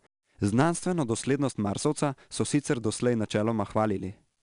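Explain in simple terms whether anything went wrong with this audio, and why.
4-bit ADPCM compression runs through the whole clip, from start to finish. This method saves space by storing each tiny slice of the speech as a small, rough step from a guess about where the sound is heading, adjusting the step size as it goes. The rounding errors form a gritty hiss that rises with the loudness of the speech, and sudden attacks smear because the steps can't grow fast enough. Everything above about 10.6 kHz is also missing, so the top end sounds dull.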